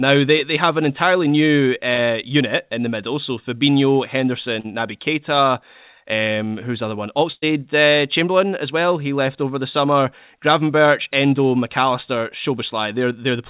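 At 4.60 s, about 40 ms of the call failed to reach the decoder in time, a short concealed packet loss. The receiver covered the hole by extending the sound it had just played, carrying on its pitch if voiced or as shaped noise if not, then blended back into the real signal at 4.66 s. The result is a brief smear or wobble, and anything short that fell inside those 40 ms is gone.

From 7.32 s to 7.44 s a burst of packet loss takes out about 100 ms, too long for the receiver to bridge convincingly. It kept extending the last sound for about 102 ms and faded it as the gap grew, so what you hear is a held buzz or fading hiss, with about 30 ms of near silence in it. The sound then picks up further along, skipping the material in between. Throughout, the audio stops at 4 kHz, which fits the telephone-band G.711 mu-law codec on this call path.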